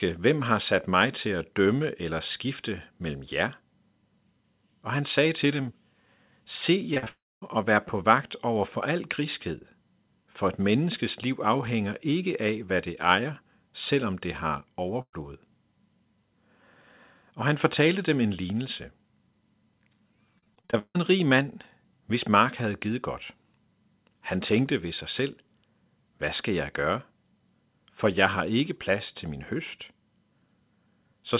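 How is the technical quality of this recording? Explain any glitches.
The recording has several network glitches: a cluster of packet loss around 7 s, a burst at 15 s and a choppy stretch near 21 s. Throughout, the sound sits on a telephone-band call path with nothing above 4 kHz, which fits G.711 mu-law at 64 kbps.

Short concealed packet loss, at 6.94 s, 6.98 s and 7.04 s: the speech smears and wobbles briefly in three quick tics, each a held-over smudge instead of fresh sound. About 20 ms, 40 ms and 20 ms never arrived in time. Each time, the receiver extended the last sound, following its pitch where voiced and using shaped noise where not, and blended back.

Long network dropout, 7.08 to 7.44 s: right after those tics, a continuation of the last sound fades out and then about 240 ms of near-silence follows before the speech picks up further along. Some 340 ms is missing in total. The likely cause is a network dropout, during which nothing arrived and the concealment ran out and gave way to quiet.

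Burst of packet loss, 15.02 to 15.15 s: the last sound is held briefly and dies away into roughly 60 ms of silence, and then the speech resumes past a jump. About 120 ms of consecutive audio was lost or arrived too late. The receiver stretched the last sound while lowering its level until real packets returned.

Repeated packet loss (robotic sound), 20.39 to 20.97 s: the speech turns choppy, with bits chopped out. Eight separate gaps hit this stretch, the longest about 158 ms, and roughly half of the span is patched rather than real. Each hole was filled by continuing the previous sound, and the next loss arrived before the voice could settle.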